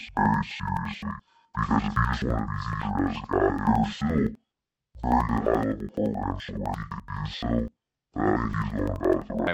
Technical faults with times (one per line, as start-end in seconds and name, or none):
0.00-9.53 interleaved audio read as planar